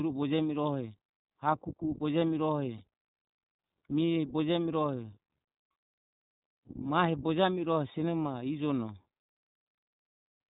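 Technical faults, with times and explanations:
Throughout: iLBC codec. The speech is narrowband, with nothing above 4 kHz, so it sounds muffled and telephone-like. The codec is plainly audible as a slight roughness and a synthetic edge on the voice. It works in 20 ms frames and codes each frame's excitation on its own, without drawing on the previous frame. The character of the artefacts fits the 15.2 kbps mode of this codec.
2.78 to 2.81 s: lost iLBC frames. About 20 ms of audio is missing, which points to a single lost packet. The decoder fills the hole by repeating the last pitch cycle blended with noise. That makes a brief held, slightly buzzy vowel in place of the real sound. The gap is short, so there is no audible fade. Each iLBC frame decodes independently, so the voice recovers almost immediately afterwards.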